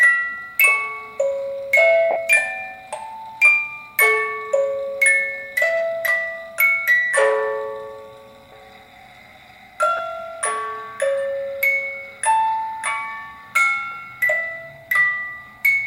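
At 2.11 to 2.16 s the sound briefly turns into a hissy, grainy smear and thins out before recovering. A shorter smear of the same kind follows at 9.97 to 9.99 s. These are lost LE Audio frames: the LC3 decoder covered each gap by repeating the last spectrum with random signs, fading it once the gap ran past the first few frames. The first gap spans about 50 ms, which fits five 10 ms frames, and the second about 20 ms, which fits two.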